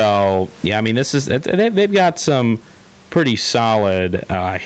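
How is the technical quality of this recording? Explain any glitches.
The main problem is gain pumping, and it runs through the whole clip. The level keeps swinging by something like 10 dB. The likely cause is the input gain set far too hot for the mic, with a fast limiter or compressor clamping it on every peak and letting go in the gaps. That squashes loud and soft passages toward the same level, so the speech sounds flattened, and the room noise sits well below the speech. The top end also stops at around 8 kHz, which fits the call codec's bandwidth rather than being a separate fault.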